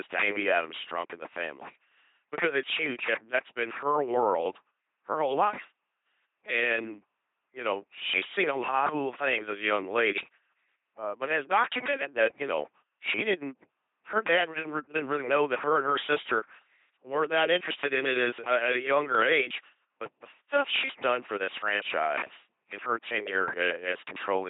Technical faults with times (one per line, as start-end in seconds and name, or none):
0.00-24.49 LPC-10 vocoder